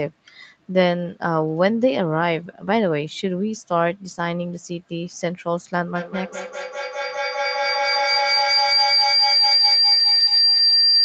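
At 5.95 s a feedback howl begins and runs to the end of the clip. Two devices on the same call share a room, so the loudspeaker's output re-enters the microphone and the loop returns more level on each pass. The repeats grow instead of fading and narrow to a shrill tone around 5 kHz, well inside the call path's 8 kHz bandwidth. The loop repeats roughly every fifth of a second, and the howl peaks about 3 dB above the speech.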